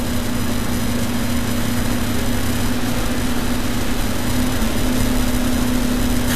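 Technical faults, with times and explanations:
Throughout: Vorbis compression. Nothing reaches above 14.2 kHz, and the remaining treble sounds hissy and grainy, with fine detail replaced by noise of about the same energy and attacks smeared. That's likely a low-quality Vorbis encode, which fits a bitrate around 32 kbps.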